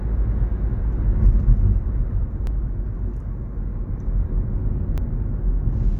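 Overlapping chunks at 2.47 s and 4.98 s: the sound was handled in 2.5-second blocks, each starting slightly before the previous one ended. About 6.5 ms replays at each join, heard as a brief click or tiny stutter every 2.5 seconds.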